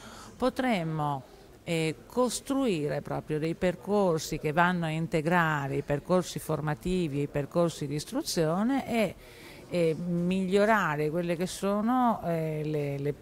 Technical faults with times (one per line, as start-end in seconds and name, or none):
3.45 block of digital silence